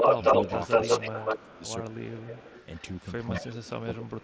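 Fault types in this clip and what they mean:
Echo leak: a copy of the speech comes back about 0.19 to 0.2 s late, likely loudspeaker echo the canceller missed; early on it's louder than the speech.
Speech suppressed in double talk: the speech dips in pieces, hardest at 1.35 to 1.62 s and from 3.3 s on, likely the canceller ducking overlapping talk.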